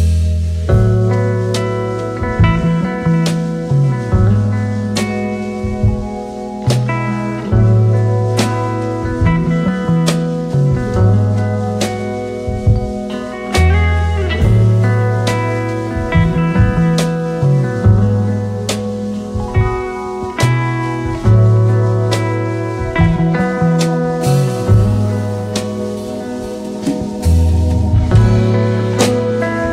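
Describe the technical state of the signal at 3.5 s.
Nothing is wrong with the signal at 3.5 s; the audio is intact at that point.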